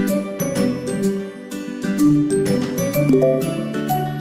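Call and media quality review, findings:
No audible defects found; no dropouts, level anomalies or timing irregularities detected, nothing to action.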